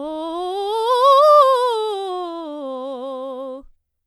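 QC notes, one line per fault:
No faults to log for this music clip.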